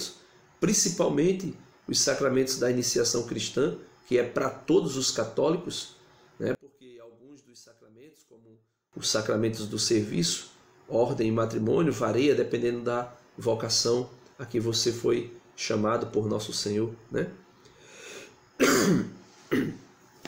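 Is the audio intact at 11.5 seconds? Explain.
Yes, the audio at 11.5 seconds is intact, with nothing audible there to suggest a fault.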